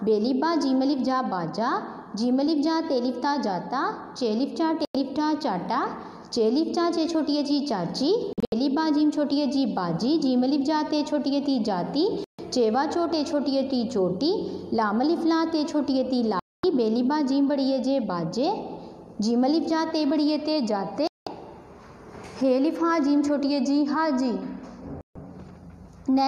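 You get a digital broadcast dropout six times, at 4.85, 8.33, 12.24, 16.39, 21.07 and 25.01 s: the receiver lost good frames and muted, so the sound cuts out for roughly 0.1 to 0.24 s. The one at 8.33 s breaks into short holes over about 0.19 s.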